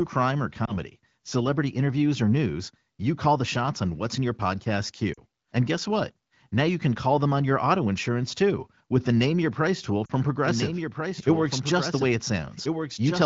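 A speech clip carried over the AMR wideband (HD Voice) codec, with light coding damage. Lost AMR speech frames cause three short glitches. At 0.65 s there is a brief dip or warble, consistent with one missing 20 ms frame. At 5.13 to 5.20 s and 10.05 to 10.12 s the sound drops to near silence, consistent with about 40 ms lost each time. The decoder bridges each gap by repeating the last good frame at falling gain. A doubled audio track starts abruptly at 10.43 s and runs to the end. A second full-band copy of the speech follows about one and a half seconds behind, roughly 5 dB quieter, with no decay or room colour. It was likely captured a second time through a slower path.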